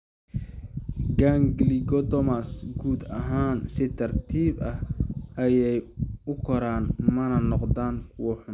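No audible fault in this speech recording: no dropouts, clicks, clipping or level jumps anywhere in the clip.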